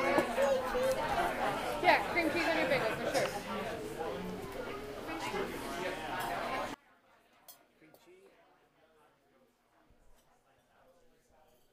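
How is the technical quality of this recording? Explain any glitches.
The recording has one clear fault in its second half. From 6.74 s to the end, the sound collapses by about 28 dB to a faint trace. The likely cause is one channel inverted, cancelling shared content in mono.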